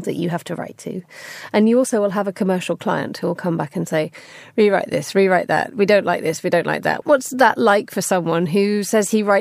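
Nothing in this speech recording stands out as a technical fault anywhere along its run, so there's nothing to track in time here.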